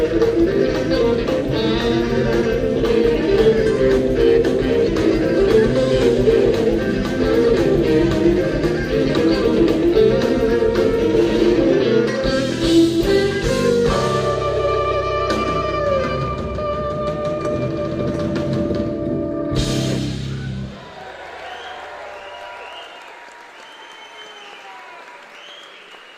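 No technical faults occur at any point in the audio.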